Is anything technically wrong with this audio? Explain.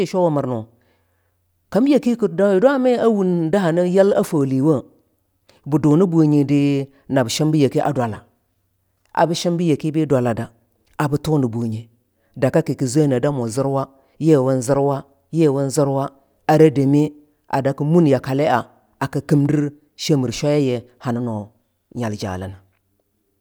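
No, nothing technical stands out here; the recording holds together with no glitches or defects to point to.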